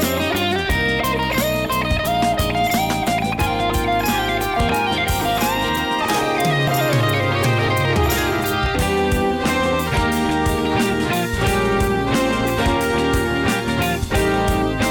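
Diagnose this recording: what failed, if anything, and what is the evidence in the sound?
Periodic USB or driver dropouts run from 3.70 s to 10.66 s: about seven short ticks spaced 1.0 s apart, each a gap of roughly 2 ms where audio is skipped outright rather than filled with silence. The failure sits at the driver or buffer stage. Something on the host stalls the USB transfer or audio driver on a fixed one-second cycle, so a sliver of samples never arrives and the waveform jumps, producing an evenly spaced click.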